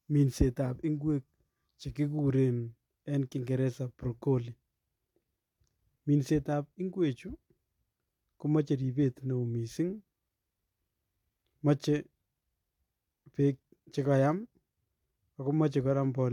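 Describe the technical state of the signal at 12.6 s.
At 12.6 s the speech signal is intact, with no audible technical fault at that point.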